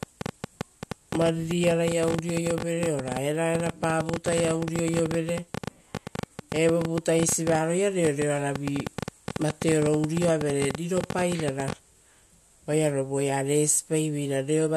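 Interference from nearby equipment or a faulty connection or power supply is likely injecting pulses from 0.03 s to 11.73 s, producing a train of clicks. Some 150 similar clicks arrive unevenly, about 12 per second, peaking roughly 15 dB above the speech and ticking through the pauses.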